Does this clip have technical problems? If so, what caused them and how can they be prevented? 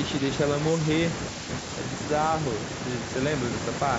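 No, there are no technical problems to report here.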